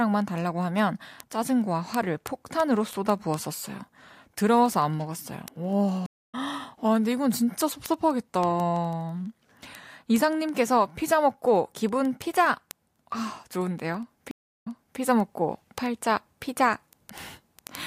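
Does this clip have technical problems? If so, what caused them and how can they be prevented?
Yes. Two stream reconnects occur, at 6.06–6.35 s and 14.31–15.00 s. Each time the connection broke, playback went silent, for 235 ms and then 323 ms, and a fresh decoder restarted mid-stream. The first resumes roughly a fifth of a second later, so audio is skipped. The second resumes 360 ms earlier, so a stretch is repeated. A waveform shows a flat gap followed by an abrupt or faded restart, and a spectrogram shows a blank vertical band. A larger client buffer and reconnection that resumes at the exact stream offset would prevent this.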